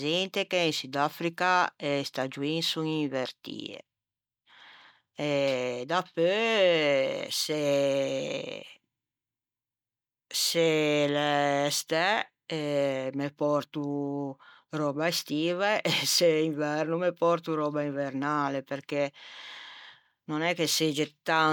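No technical faults are audible anywhere in the speech recording.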